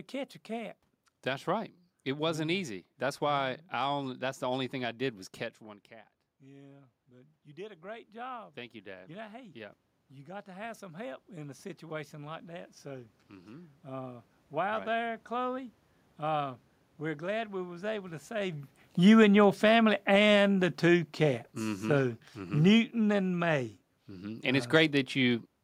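Just before 6.4 s the talker moves back from the microphone, and the level drops by about 16 dB. From 6.4 s to 14.31 s the automatic gain rises to compensate. The control sees a quiet input and lifts its gain slowly, by about 15 dB in total. The voice swells back over several seconds. The room noise swells with it, so the background grows louder behind the speech. The rise is slow.

Around 18.5 s the talker moves again, while the gain is still set high. From 18.95 s to 23.64 s the automatic gain falls by about 8 dB. The control sees too much level or too strong a background for its gain, and pulls back gradually. The speech sinks over nearly five seconds. The room noise sinks along with it, a clear sign of the gain moving.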